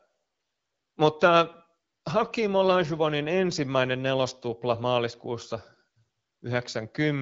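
Nothing here stands out as a technical fault; it's just speech carried over an AMR wideband (HD Voice) link at 12.65 kbit/s, with the usual top end stopping a little above 7 kHz.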